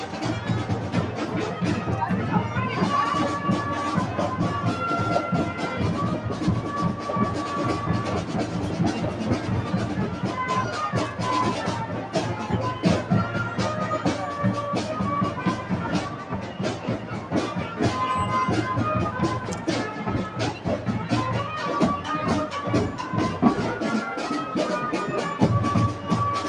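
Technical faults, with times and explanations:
16.43–16.59 s, sound cut by the noise suppressor: the sound briefly sinks by about 4 dB for roughly a sixth of a second, then recovers. The noise suppressor mistook this stretch for background noise and turned it down harder than its surroundings.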